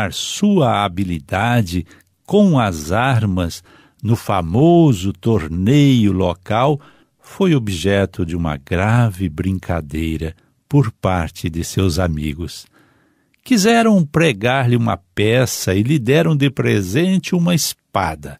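No faults detected anywhere in the speech recording.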